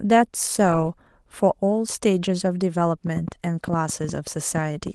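From 3.07 to 4.88 s, a train of clicks: around ten uneven pops, about 5 per second, peaking about 5 dB above the speech, likely from interference.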